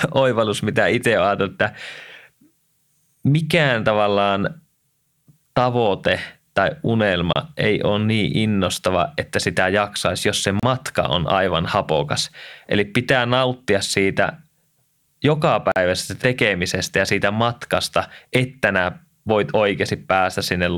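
At 7.33 s, 10.60 s and 15.72 s the speech drops to silence for about 27, 33 and 44 ms, then resumes. These gaps are likely Bluetooth stalls, where interference delayed packets and the headphone buffer ran dry until retransmitted audio arrived.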